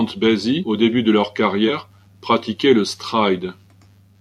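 Whole compressed frames were lost or rejected by the decoder, so compressed frames are skipped in this speech. At 0.60–0.64 s, before "au début de leur", and at 1.66 s, before "pratiquaient le", roughly 150 ms jumps away in 42.7 ms steps.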